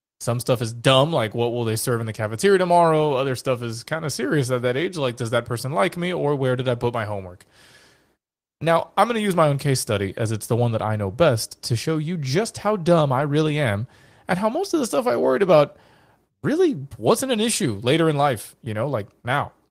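At 13.19 s, between "you just how dumb" and "really am and how", a lost packet rebuilt from error correction: the network dropped what sounds like one packet, and the decoder filled the hole with the low-bitrate backup copy carried in the following packet. Because a stand-in was played, there is no silence. Instead, about 20 ms of the speech turns briefly rougher and grainier, a short smudge of coarser, noisier texture before full quality returns.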